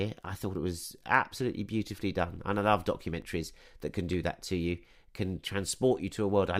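At 3.22 s, after "done and I love", and at 4.13 s, before "that to you can", the speech jumps: a dropped buffer (overrun), likely losing around 15 ms and 10 ms, spliced straight together with no silent gap, unlike a dropout.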